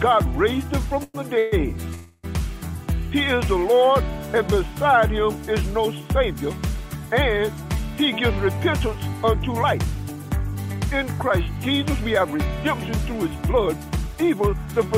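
Three call audio freezes, likely caused by delayed packets draining the jitter buffer, occur at 1.03–1.16 s, 1.38–1.54 s and 1.94–2.25 s. Each time the receiver extends the last sound as a fading buzz or hiss, inserting roughly 0.11 s, 0.14 s and 0.3 s of fill before the sound resumes where it stopped, with nothing lost.

Later the buffer holds too much audio, and the receiver trims short pitch-period pieces to reduce the delay. Jitter buffer speed-up results at 8.47–9.25 s (104% speed), 9.79–10.86 s (107%) and 13.14–14.80 s (108%). Each stretch runs faster at unchanged pitch, the last two sounding hurried, with about 40, 70 and 150 ms removed.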